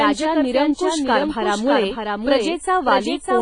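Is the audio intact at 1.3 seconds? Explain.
No. Throughout the clip, including at 1.3 s, a doubled audio track is likely at fault, with the speech captured twice. A full-band copy about 5 dB quieter trails by roughly 0.7 s, with no decay or room colour.

The sound also points to WMA compression at a low bitrate, around 24 kbps. Long transform blocks smear quantisation noise into a ringing, washy hiss that breathes with the signal, and nothing remains above 10.3 kHz.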